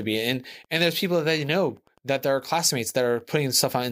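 Running under the speech from start to finish there's Wi-Fi interference: a nearby radio's beacon, firing every 102.4 ms, gets rectified by the audio circuit, so you hear a steady tick just under ten times a second, sitting roughly 40 dB below the speech.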